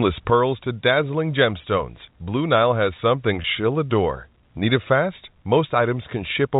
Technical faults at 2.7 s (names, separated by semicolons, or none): one channel drops out